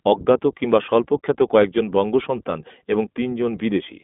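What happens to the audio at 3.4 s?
At 3.4 s the speech is still passing through the iLBC codec, as it does for the whole clip. The codec rebuilds each short frame's excitation on its own, without drawing on the frame before, in blocks that fit 20 ms frames at a rate around 15 kbps. The result is a narrow line band of roughly 200 Hz to 3.5 kHz with nothing above 3.8 kHz, so the voice sounds muffled, plainly rough and somewhat synthetic.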